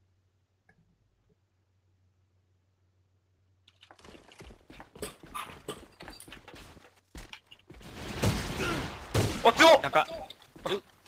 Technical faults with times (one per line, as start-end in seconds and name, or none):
3.38-3.51 skip ahead